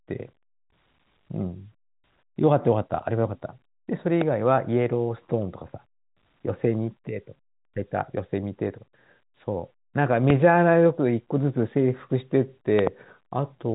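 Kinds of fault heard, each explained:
Loud pop: A sharp pop hits at 4.21 to 4.24 s and at 10.30 to 10.32 s, then a quick double pop from 12.79 to 12.89 s. Each peaks about 15 dB over the speech, which continues beneath. The likely cause is a sudden voltage spike.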